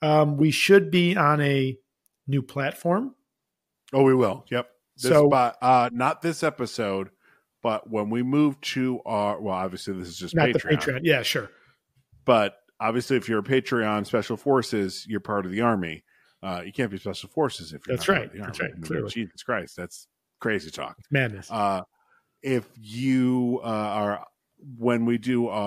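Sample clock jitter runs throughout the speech. The converter's clock wobbles by a fraction of a microsecond. That adds faint hiss, roughly 50 dB down, on loud passages.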